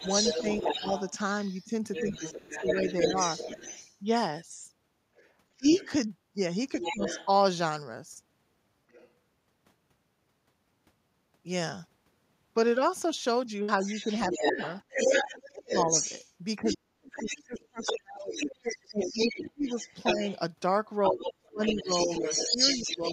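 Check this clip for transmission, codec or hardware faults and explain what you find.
Two echo-control faults run through the speech: the far-end voice leaks into the recording, and the talker is repeatedly ducked while both sides speak at once.

Other side's voice leaking through occurs from 0.0 to 7.28 s at about 5 dB below the talker, briefly and faintly at 8.91 to 9.1 s (about 30 dB down), and from 13.83 s to the end at roughly equal level. The likely cause is an echo canceller leaving loudspeaker output in the microphone signal. A second voice is audible under the talker. On a spectrogram it appears as a separate harmonic pattern overlapping the main one.

Speech suppressed in double talk appears from 0.0 to 3.62 s and from 5.53 to 7.1 s, with dips of about 25 dB. The cuts total around half a second in the first stretch and a few tenths in the second. From 14.29 s to the end, drops reach about 35 dB over roughly four seconds in total. 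The canceller, unable to separate both talkers, likely attenuated everything. The talker's voice gets quieter, duller or broken up, and the waveform shows the envelope punched into sharp notches.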